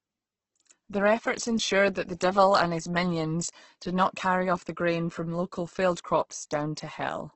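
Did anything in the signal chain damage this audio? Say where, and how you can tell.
Yes, at the codec stage, and throughout the clip. The speech has nothing above about 8.2 kHz and sounds rough and grainy, with voiced tones dissolving into hiss rather than swirling. The likely cause is Opus compression in its music (CELT) mode at a very low rate, around 12 kbps. Short of bits, the encoder keeps each band's energy but fills the detail with folded or noise-like content and caps the bandwidth.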